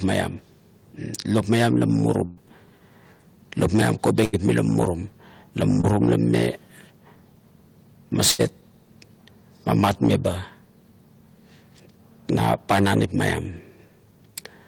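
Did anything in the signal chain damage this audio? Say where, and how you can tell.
Yes, the damage happened on the network, and you can hear it as three bursts of packet loss. At 2.25 to 2.39 s about 120 ms of speech goes missing, and at 4.25 to 4.35 s and 8.31 to 8.41 s about 80 ms each. In each gap the receiver keeps extending the last bit of sound and fades it down. Then the speech picks up further along, with the stretch in between simply gone.

There's also one short concealed packet loss at 5.81 to 5.85 s, where roughly 20 ms never made it to the decoder in time. The concealment patched that hole by continuing what came just before and then blending back into the real signal. The result is a quick smear or wobble rather than an obvious dropout, and it's short enough that a brief sound at that spot could have disappeared.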